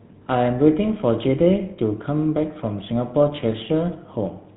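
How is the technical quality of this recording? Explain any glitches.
The recording is limited by one fault that runs through the whole clip. GSM full-rate codec, throughout: the speech is modelled as a vocal-tract filter driven by a sparse, regularly spaced pulse train, and nothing above 4 kHz survives. The result is a plainly audible buzzy, gravelly roughness and a muffled top end, which fits the 13 kbps full-rate coder.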